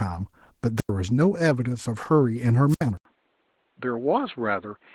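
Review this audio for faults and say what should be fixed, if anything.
Opus voice compression runs throughout this speech. At about 16 kbps in hybrid mode, coarse coding leaves it plainly muffled and slightly robotic. Raise the bitrate.

Wireless microphone squelch dropouts occur at 0.77–0.90 s and 2.68–2.84 s. Hiss rises, then the receiver mutes for about 94 ms and 69 ms. Improve antenna placement and signal strength.

At 2.97 s the sound goes quiet for 80 ms. It then turns dull and about 5 dB quieter until the end, with nothing above 4.2 kHz and noise about 40 dB down. An input switched to a poorer device is the likely cause. Lock the input device before recording.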